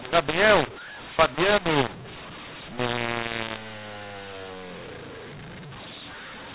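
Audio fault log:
throughout, mu-law and A-law mixed up: A-law telephone samples were decoded as mu-law, scrambling levels, so the speech sounds harsh and distorted and quiet gaps fill with noise.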